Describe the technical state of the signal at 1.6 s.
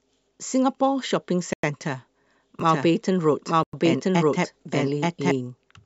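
At 1.6 s the speech falls into a gap between chunks, a hole of 100 ms running from 1.53 to 1.63 s. A join between blocks of roughly 2 s has been padded with silence or played late, so playback stops dead and then resumes exactly where it left off. The hard-edged break is what sets it apart from a dropout: no audio is missing, only pushed later.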